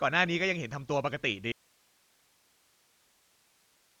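Throughout, the speech sounds dull, with nothing above 7 kHz and a rough, fluttering noise around voiced tones. This heavy Dolby Digital compression damage likely comes from a starved encoder, which fits roughly 40 kbps, leaving frequency lines without mantissa bits that the decoder fills with dither noise rather than leaving clean holes.

At 1.52 s the speech cuts out abruptly and never returns, leaving only hiss about 40 dB down. This audio dropout to a faint residue, likely a lost signal on a still-live path, is sudden rather than faded, and keeps an audible floor instead of silence.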